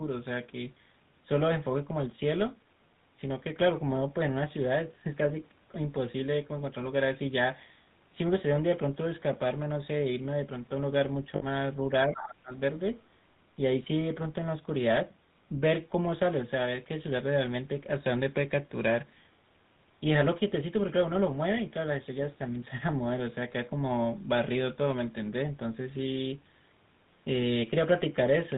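Throughout, the speech has a buzzy, gravelly roughness with nothing above 4 kHz, the plainly audible signature of the GSM full-rate codec at 13 kbps. At 11.36 to 11.44 s the sound freezes into a brief metallic ring lasting 60 ms, which fits three lost GSM frames patched by repeating the last good one. From 12.05 to 12.52 s the speech dips in pieces, by roughly 25 dB at its deepest, likely speech suppressed in double talk by an echo canceller turning both sides down. Between 12.14 and 12.35 s a second voice sits around 10 dB below the talker, likely the other side's voice leaking through.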